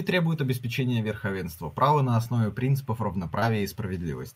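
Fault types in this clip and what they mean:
Short concealed packet loss: 20 ms of audio arrived too late at 2.23 s and 3.39 s; the decoder extended the preceding sound across each gap before rejoining.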